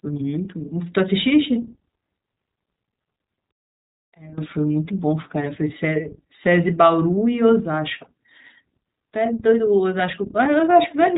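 Throughout, the speech carries iLBC codec damage. Each 20 ms frame is coded independently, which fits the 15.2 kbps mode. The result is a plainly rough, synthetic texture, and nothing above 3.8 kHz survives, so sibilants and brightness are missing.

From 0.0 s to 7.10 s, a steady USB whine sits at 8 kHz, roughly 20 dB below the signal. The pulse rate of the bus's 125 microsecond microframes is leaking in through power or ground as a fixed, thin, high-pitched tone that stops abruptly at 7.10 s.

Between 3.51 s and 4.38 s, the level falls by about 19 dB and the speech turns faint. This is likely one channel inverted, with the mono sum cancelling the centred voice and leaving only the small difference between the channels.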